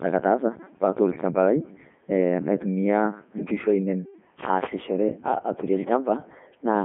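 The whole clip has gone through the Codec 2 vocoder, probably its 3.2 kbit/s mode. Speech is rebuilt from sine waves, so it's robotic and buzzy, with nothing above 3.6 kHz.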